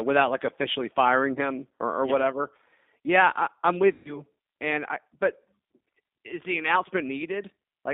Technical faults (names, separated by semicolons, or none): G.729 codec; VoIP packet loss concealed by the speech codec